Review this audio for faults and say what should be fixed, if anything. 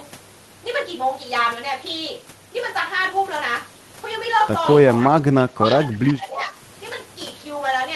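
An echo leak is heard from 5.01 to 5.21 s and again from 6.36 to 6.44 s. Each time, a faint copy of the speech returns 300 ms after the original, about 15 dB and then about 20 dB below it. The likely cause is a loudspeaker on the far end whose echo canceller let part of the microphone pickup through and sent it back. Room reverberation would sound different: it smears into a continuous decay, while this is a discrete, delayed repeat.

Speech suppressed in double talk follows at 5.27 to 5.74 s and 5.9 to 6.56 s. The level sinks for roughly 0.3 s in the first stretch and 0.7 s in the second, dropping by about 15 dB and then about 20 dB. This is likely the echo canceller, unable to separate the local talker from the returning echo, turning both down while the two sides overlap. Packet loss would sound different: it leaves abrupt gaps or synthetic filler, while here the sound ducks, and only during the overlap. 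The second stretch also contains the later echo scrap.

Fixing the far-end echo cancellation, or having that side use a headset, would prevent both the leaks and the double-talk suppression.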